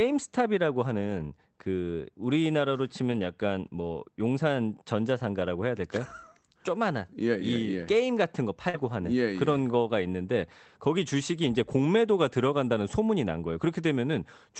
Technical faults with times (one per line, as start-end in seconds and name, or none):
3.07-3.21 lost packet rebuilt from error correction
8.69-8.75 short concealed packet loss
8.73-8.83 lost packet rebuilt from error correction